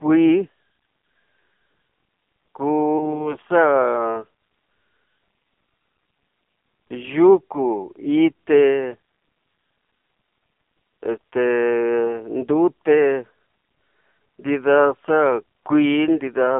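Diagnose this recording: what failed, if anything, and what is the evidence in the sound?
The fault is in the codec stage: the whole clip has passed through the AMR narrowband mobile codec at a low mode. The audio is confined to a telephone band of roughly 150 Hz to 3.5 kHz, with nothing above it. The speech has a heavy, buzzy, synthetic quality, as if rebuilt from a coarse vocal-tract model fed by sparse pulses. This damage points to a bitrate around 5.9 kbps.

A second fault sits at the network stage: lost AMR speech frames. Between 2.98 and 3.30 s, one 20 ms frame failed to arrive intact. The decoder filled the gap by repeating the previous pitch and vocal-tract settings at reduced gain. The result is a brief dip and warble in the speech, followed by a short rough, weakened stretch as the decoder recovers.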